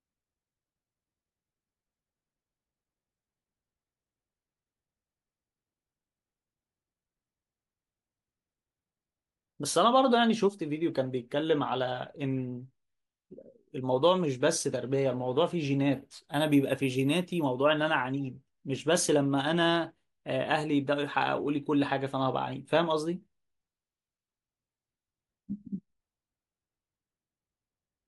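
From 15.94 to 17.44 s the speech picks up imaging from sample-and-hold upsampling. Here the rate was doubled by holding each sample twice instead of interpolating through a smoothing filter, which fits a 24 kHz source raised to 48 kHz. A mirrored copy of the spectrum folds up into the 12 kHz to 24 kHz band, about 26 dB below the speech. It sounds like a bright metallic fizz riding on the speech, rising and falling with its level.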